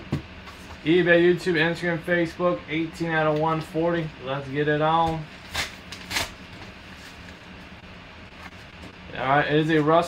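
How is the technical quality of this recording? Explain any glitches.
Two network glitches occur close together near the end of the recording.

The first is a short stall from a late packet, at 7.80 to 7.85 s. A packet arrived after it was due. The jitter buffer ran dry. The receiver held the last sound for about 26 ms until the packet came. Then playback resumed from the same point. Nothing is lost. The delay grows by 26 ms. You hear a brief hold with a slight buzz or dip.

The second is repeated packet loss, giving a robotic sound, from 8.29 to 8.95 s. Four holes fall within this stretch. Each is covered by stretching the preceding sound. About 81 ms is filled this way, roughly 12 percent of the span. Around 40 ms is simply missing. The longest hole is 22 ms. The holes come in quick succession, so the sound turns choppy, with pieces missing.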